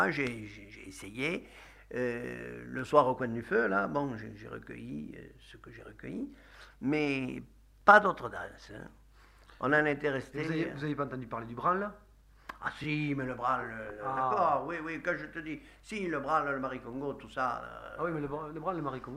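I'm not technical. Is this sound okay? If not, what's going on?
No. Overlapping chunks cause a brief stutter at 2.79–2.82, 7.82–7.84, 12.84–12.86 and 17.86–17.89 s: every 5 s, about 23 ms of sound plays twice rather than dropping out.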